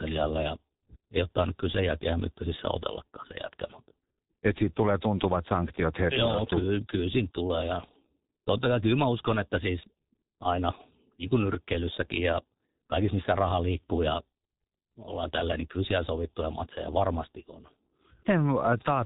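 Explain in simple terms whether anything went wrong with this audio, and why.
Yes, something went wrong. The whole clip has passed through the G.723.1 codec, an early internet-phone format, and the damage is heavy from start to finish. Nothing above about 3.8 kHz survives, so the speech sounds muffled. A plain narrow phone line would sound thin but clean. Here the voice is also hoarse and rough, and consonants smear together, because the codec rebuilds the voice from a coarse model that changes only every 30 ms.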